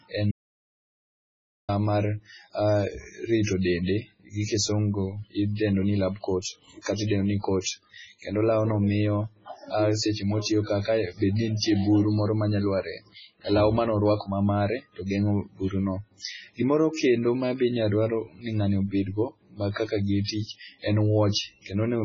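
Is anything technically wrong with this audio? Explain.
Yes. Three faults can be heard in this speech recording.

MP3 compression is audible throughout, and it is the likely cause of the damage. Nothing is present above 7.5 kHz, so the sibilants sound dull. Weak frequency components flicker in and out from frame to frame, giving a heavily watery, swirly texture. On a spectrogram this shows as a hard ceiling at 7.5 kHz with patchy, blinking detail beneath it. The damage is consistent with a very low bitrate, around 16 kbps.

There is an audio dropout to silence from 0.31 to 1.69 s, lasting about 1.37 s. The sound cuts off abruptly and returns just as abruptly, and the gap contains no room tone at all, only silence. A likely cause is a momentary loss of the input signal while recording continued. On the waveform this appears as a flat stretch, and on a spectrogram as a dark band.

Pre-echo appears at 7.61 s, just after "katidendo ni", spread over about 45 ms. 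It occurs again at 11.57 s, between "ka kae bedni" and "buru moro manya lwar", spread over about 54 ms. In each case the codec has smeared noise meant for a sharp onset back into the quiet moment before it. The attack is preceded by a short hiss and loses its crispness. On a spectrogram this shows as a thin, broadband haze leading into each onset.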